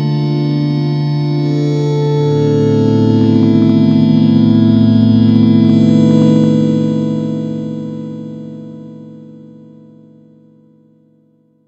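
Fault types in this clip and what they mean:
hard clipping: from 2.67 to 6.49 s the signal runs about 2 dB past what the stage can pass, so its peaks are cut flat and crackle. The waveform shows squared-off tops, and the spectrogram shows brief vertical streaks of high harmonics.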